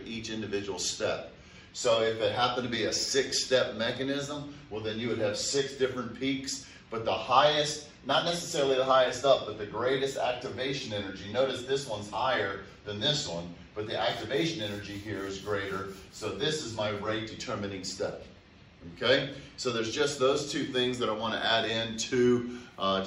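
Nothing technically wrong can be heard in this audio. No dropouts, distortion or other defects stand out anywhere in it.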